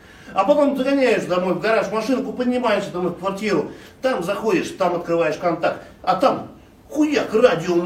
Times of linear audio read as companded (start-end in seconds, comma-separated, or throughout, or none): none